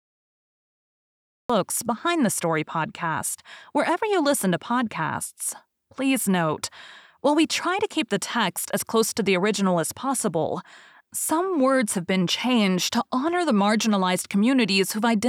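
From 0 to 1.50 s there is digital silence, then a cut-off start: the speech enters abruptly mid-sound, with no natural attack or fade-in, unlike a gentle fade-in.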